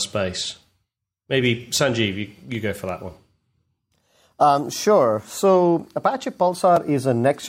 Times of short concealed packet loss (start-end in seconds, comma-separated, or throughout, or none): none